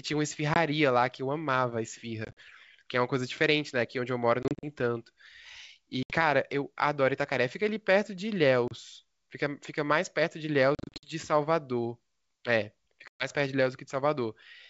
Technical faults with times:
0.54-0.58 packet loss on an ADPCM call
2.25-2.42 packet loss on an ADPCM call
4.43-4.65 packet loss on an ADPCM call
6.03-6.14 packet loss on an ADPCM call
8.68-8.73 packet loss on an ADPCM call
10.75-11.14 packet loss on an ADPCM call
13.08-13.28 packet loss on an ADPCM call

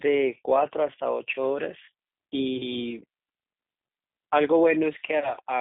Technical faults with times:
0.00-5.60 G.729 codec
2.57-2.63 VoIP packet loss concealed by the speech codec
5.19-5.36 VoIP packet loss concealed by the speech codec

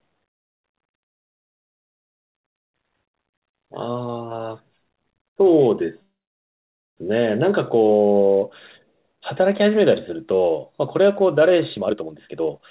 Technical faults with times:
6.02-6.99 call audio freeze
11.76-12.60 jitter buffer speed-up

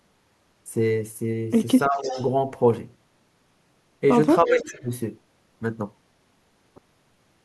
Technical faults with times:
1.87-2.19 speech suppressed in double talk
1.95-2.28 echo leak
4.45-4.79 speech suppressed in double talk
4.47-4.83 echo leak

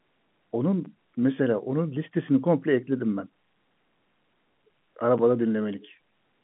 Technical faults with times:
none

